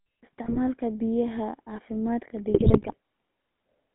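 A buzzy, gravelly roughness runs through the whole speech clip, with a thin band of roughly 200 Hz to 3.5 kHz. That is the GSM full-rate codec, which rebuilds the voice from a vocal-tract model driven by sparse, regular pulses, plainly audible here and consistent with its 13 kbps rate. Two bursts of squawking, gargling breakup occur at 0.44 to 0.57 s and, longer and heavier, at 2.48 to 2.95 s. These are GSM bit errors: corrupted filter, pitch and gain values distort the spectrum and level frame by frame, pointing to an error rate of about 2%.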